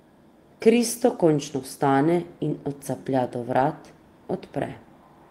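Speech, with nothing technically wrong to point to at any time.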